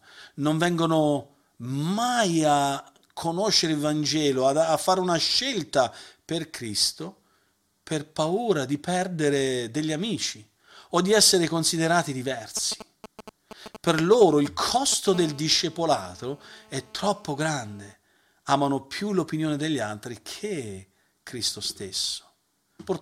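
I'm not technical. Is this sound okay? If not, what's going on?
No. From 12.57 to 15.09 s, right after "o di essere considerati", there are GSM signalling bursts: a galloping tick-tick-tick with short, fairly loud buzzes. A nearby 2G mobile phone is sending quick radio pulses, and the recording gear picks them up as sound.

Then from 15.14 to 17.94 s comes a steady GSM phone buzz, a raspy drone at about 217 Hz. It is quieter than the bursts. A phone has settled into a call and is now pulsing nonstop, and the audio circuit turns each pulse into noise.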